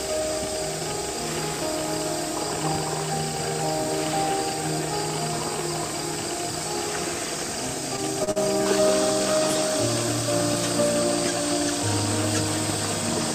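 Across the whole clip the sound is coated in grainy, rough distortion that rises and falls with the signal. Quiet stretches turn gritty and sputter rather than fading smoothly. This is low bit depth without dither, likely from rounding to very few levels, which fits about 6 bits. The error sits roughly 20 dB below the signal. A zoomed waveform shows visible staircase steps, and a spectrogram shows broadband hash that appears only where the signal is present.

Three short stalls from a late packet follow in quick succession, at 7.96 s, 8.24 s and 8.31 s. Each time the jitter buffer ran dry, and the receiver held the last sound for 15 ms, 32 ms and 48 ms respectively before resuming where it left off. Nothing is lost, but each moment smears or buzzes briefly. On a spectrogram these appear as flat, frozen vertical bands. The waveform shows a repeated, periodic segment at each point.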